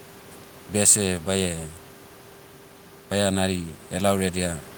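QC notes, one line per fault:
Nothing to flag on this speech clip, just a bit of room noise sitting about 24 dB below the talking, which is simply part of the recording.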